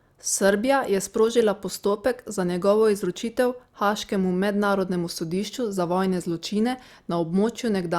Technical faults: none

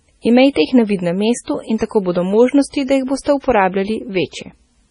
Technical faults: MP3 compression

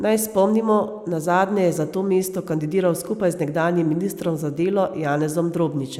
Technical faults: none

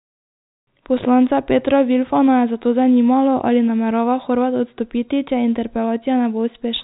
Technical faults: none

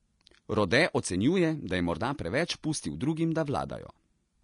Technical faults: Vorbis compression

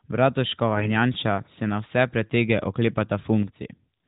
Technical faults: AMR bit errors

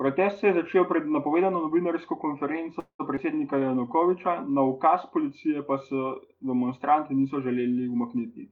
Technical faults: call audio freeze; skip ahead; jitter buffer slow-down

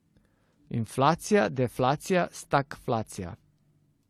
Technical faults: transcoding between lossy codecs

